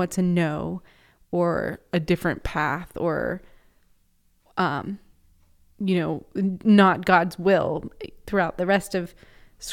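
From 1.75 to 2.59 s the speech slows by about 5.8% and drops roughly a semitone (104 cents), then snaps back to normal speed and pitch. The reverse happens from 8.54 to 9.13 s, just after "will throughout": the audio runs about 5.8% fast and rises about 98 cents. These are drift correction steps, likely from clock-matching software abruptly changing the playback rate to drain or refill its buffer, so speed and pitch shift together.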